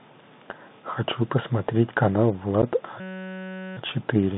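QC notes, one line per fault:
Throughout: Bluetooth CVSD headset codec. The link encodes one bit per sample at 64 kHz, stepping up or down with an adaptive step, and passes only about 150 Hz to 3.7 kHz. The speech sounds plainly narrowband, with scratchy sibilants, distortion on loud high content and a granular hiss beneath.
2.62 to 2.63 s: unconcealed Bluetooth headset packet loss. Around 11 ms of audio went missing between headset and phone, consistent with roughly three lost packets, and nothing filled the gap. The result is a brief hole with hard edges that can click, and the speech returns momentarily quieter.
3.00 to 3.77 s: system hang loop. The computer or driver stalled while the audio hardware kept replaying one 5.33 ms slice of its ring buffer, which fits a 256-sample buffer, 144 times over. The repetition at 188 Hz turns that span into a steady mechanical buzz.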